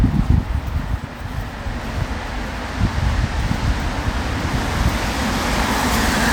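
No technical faults occur at any point in the audio.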